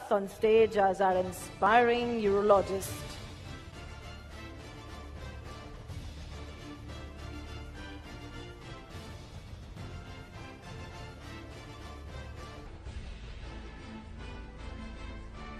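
From 12.67 s to the end at 15.59 s, a section at the wrong speed plays at 0.748 times its proper rate, likely from being clocked incorrectly. Unlike a simple pitch shift, timing stretches as pitch drops about five semitones, so everything turns deep and sluggish together.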